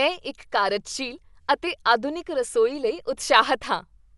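From start to end, the speech stops at 11.4 kHz and sounds dull, with rough, fluttering noise around tonal parts. Likely cause: Dolby Digital compression at a low rate, fitting 64 kbps, filling unfunded frequency lines with dither noise, unlike a clean low-pass filter.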